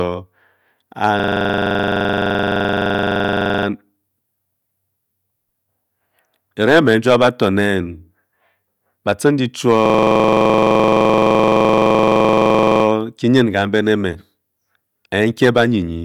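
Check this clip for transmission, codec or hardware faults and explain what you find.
The speech breaks twice into a system hang loop, from 1.20 to 3.67 s and again from 9.86 to 12.84 s. Each time, one 42.7 ms sliver of sound repeats at 23.4 Hz, giving a hard, rattling stutter that sits between a buzz and a machine-gun effect. The cause is a driver or system freeze while the audio hardware kept replaying the same ring buffer. The loop length fits a 2048-sample buffer.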